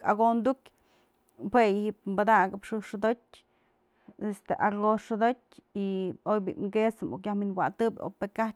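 De-emphasis applied wrongly affects this speech recording from 3.06 to 7.67 s. A treble-cutting filter, meant to reverse a pre-emphasis boost that was either never there or already undone, tilts the response smoothly downward so 10 kHz sits about 10 dB below 1 kHz, leaving the sound dull and muffled.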